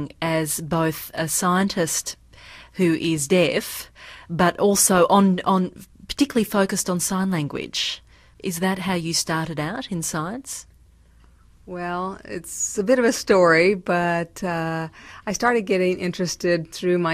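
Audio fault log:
Nothing turned up on this listen, so there's nothing to log here.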